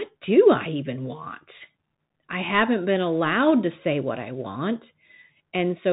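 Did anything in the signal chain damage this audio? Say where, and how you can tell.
Yes. Throughout the speech the top end stops dead near 3.8 kHz, s sounds come out scratchy, and a granular hiss sits underneath. That points to the codec stage: a Bluetooth CVSD headset codec, which fits a 64 kbps link, tracking the waveform one up-or-down bit at a time and distorting where its step size can't keep up.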